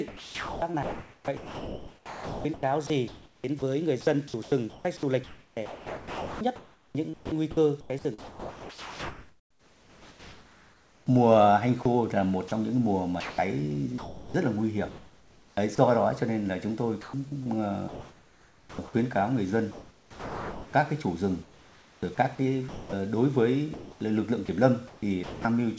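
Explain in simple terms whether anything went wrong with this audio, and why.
Sound chopped by the voice detector occurs from 0.08 to 15.78 s, 17.01 to 18.79 s, 19.72 to 22.93 s and 23.74 to 25.45 s. Quieter parts cut out and are filled with artificial hiss, likely because the sender's voice detector kept switching transmission on and off.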